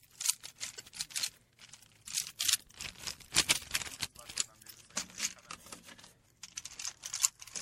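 A recording of everyday sounds, likely squeezed through MP3 compression at a low bitrate, in a way that fits roughly 64 kbps. The encoder has starved weak frequency lines, so the whole clip sounds watery, with swirling, metallic edges and smeared attacks. The compressed stream also carries damaged data in two places, from 0.76 to 0.80 s and from 7.20 to 7.22 s. There the decoder misreads the corrupted frames and hunts for the next valid header, so each spot is heard as a brief chirp or blip.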